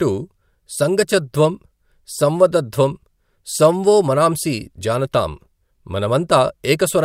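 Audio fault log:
The speech signal is continuous and stable across the whole clip, with level, timing and frequency content holding steady and nothing audible departing from the recording itself.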